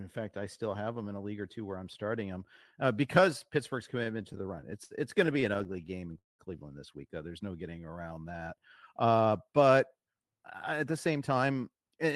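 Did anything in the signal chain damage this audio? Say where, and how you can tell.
Yes. Repeated stalls (stutter) run from 4.03 to 6.06 s, at the network and jitter buffer stage of the call path. Packets arrived too slowly, so the buffer emptied 19 times, the longest gap 66 ms. The receiver stretched the last sound to fill about 300 ms, which is 15% of that span. The audio drags, but nothing is lost.

A call audio freeze sits at 6.19 to 6.42 s, just before "this week". The last sound is continued briefly and then drops to about 170 ms of silence, 202 ms filled in all. The likely cause is packets held up in the network that drained the jitter buffer. Playback resumes where it stopped, now 202 ms later.

A jitter buffer slow-down spans 7.28 to 8.94 s. To rebuild its reserve, the receiver repeated single pitch periods and bits of pauses, adding 207 ms. The audio plays at 88% speed with unchanged pitch, so sounds come out drawn-out.

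A jitter buffer speed-up runs from 10.72 s to the end at 12.15 s. The buffer held too much, so the receiver cut short pitch-period pieces, roughly 150 ms in total. The audio plays at 110% speed with the same pitch and sounds hurried. The 12 kHz band limit of the Opus call path is the codec's usual behaviour and is not part of this damage.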